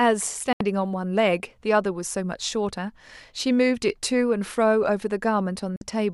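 At 0.53 s the speech cuts abruptly to silence until 0.61 s, then again from 5.76 to 5.82 s. These are digital broadcast dropouts: the receiver muted on failed frames, with a 3 ms fade. The 72 ms and 48 ms lost fit three and two frames.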